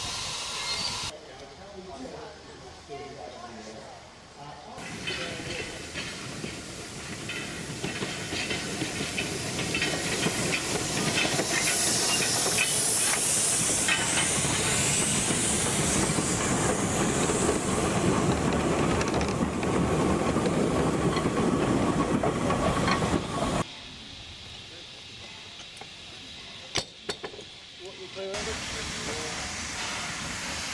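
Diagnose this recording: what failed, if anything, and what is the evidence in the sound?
Nothing failed: no stage in the chain leaves any audible evidence of a fault anywhere in the recording.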